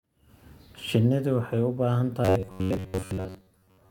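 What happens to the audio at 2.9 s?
At 2.9 s the speech has turned into robotic sound from repeated short buffers. It begins at 2.25 s, right after "u baahan", and lasts until the clip ends at 3.91 s. The likely cause is audio arriving too seldom, so the software keeps replaying a short slice of about 10.7 ms while most of the real audio is skipped. That repetition imposes a rigid buzz near 93.8 Hz. The voice sounds metallic and mechanical but still roughly traces the words.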